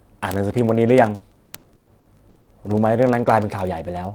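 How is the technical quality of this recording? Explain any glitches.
The recording is marred by two faults: a steady ticking through nearly the whole speech clip, and a choppy, broken stretch in the middle.

Word clock ticks run from 0.11 s to the end, about every 20 ms. The receiving device's clock is off by roughly a thousand parts per million, so one sample is dropped or repeated at each slip. On a spectrogram these appear as evenly spaced thin vertical lines. In the waveform they are tiny single-sample discontinuities.

Repeated packet loss (robotic sound) affects 1.15 to 2.50 s. There are seven gaps totalling 480 ms, the longest 120 ms, so about 36% of that span is patched by extending the preceding sound. The speech turns choppy and robotic, with pieces missing. A spectrogram shows smeared, frozen-looking blocks with abrupt edges.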